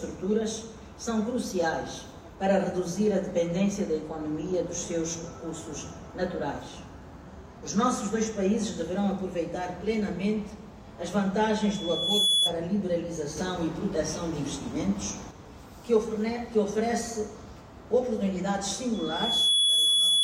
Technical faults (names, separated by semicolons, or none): loudspeaker feedback squeal